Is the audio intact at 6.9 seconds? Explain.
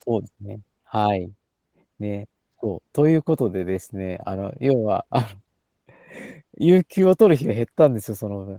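No, Opus voice compression runs through the whole clip, including 6.9 s: coarse SILK coding plus a thin CELT top band gives hoarse, slightly robotic speech, fitting roughly 16 kbps.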